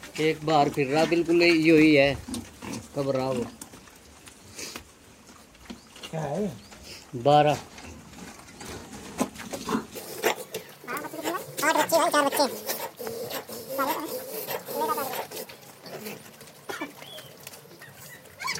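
From 9.96 s to the end, the audio is read two samples at a time (double speed): the reader treats each sample pair as one frame, so the sound runs twice as fast and an octave higher.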